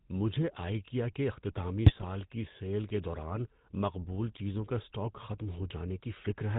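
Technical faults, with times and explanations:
Throughout, GSM full-rate codec: the speech has a buzzy, gravelly roughness and sounds dull and narrow, with the damage plainly audible. The codec models the vocal tract as a filter and excites it with a regular pulse train, keeping only every third excitation sample. That coarse excitation produces the grainy buzz. Nothing above 4 kHz gets through, so the sound loses its brightness. The rate fits the 13 kbps full-rate mode.
1.86 to 2.05 s, GSM bit errors: just after "مجھے آئیکیا کے اختتامی", the speech breaks into squawks, pops and a gargling sound for about a fifth of a second. At a bit error rate of about 2.4%, corrupted bits reached the decoder and damaged its filter, pitch and gain parameters. That bent the spectrum and made the level jump frame by frame across a short run of frames.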